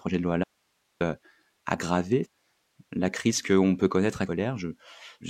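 From 0.44 to 1.01 s the speech is lost to an audio dropout that leaves a faint residue: for about 0.57 s only hiss remains, roughly 45 dB below the signal. The most likely cause is a break in the path feeding the signal while everything downstream stayed live. The cut in and out is abrupt rather than faded. On a waveform the envelope collapses to a thin band of noise, and a spectrogram shows a sharp-edged gap filled with broadband speckle.

Between 4.23 and 4.28 s the sound jumps ahead with a short blip. This is a stream segment skipped, most likely because one segment of the segmented stream failed to load and playback resumed at the next, so a second or more of the programme never arrives. On a waveform this appears as a sudden discontinuity where the contour changes shape without any gap. The spectrogram shows a thin vertical click line where the harmonic patterns break off and restart.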